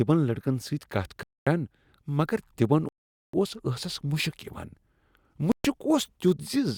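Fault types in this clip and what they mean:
Bluetooth stall: The speech cuts to silence three times, for about 0.24 s, 0.45 s and 0.13 s, then resumes. The longest gap follows "مگر تمن" at 2.89 s. Interference likely delayed packets, emptying the headphone buffer until resent data arrived.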